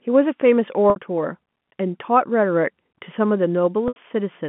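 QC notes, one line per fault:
0.90 s and 3.88 s, packet loss with pitch repetition: about 60 ms and 80 ms of audio go missing, and the receiver fills each gap by looping the last pitch period, heard as a brief held, buzzy tone before speech cross-fades back.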